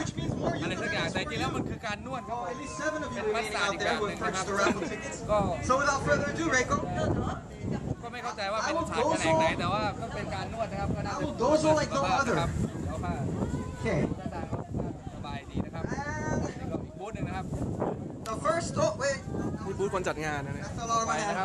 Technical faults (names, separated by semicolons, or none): compressed frames skipped